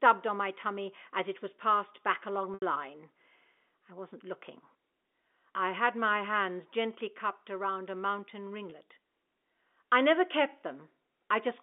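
Packet loss with pitch repetition occurs twice on this G.711 telephone-band line. At 2.54 to 2.62 s, just after "was passed back along", 80 ms of audio goes missing, which fits four 20 ms packets. The receiver loops the last pitch period, which fades out over about 50 ms into silence, and the speech then cross-fades back in. At 8.70 to 8.72 s, after "cupped around a mountain", a single 20 ms gap is bridged with a brief, buzzy held note.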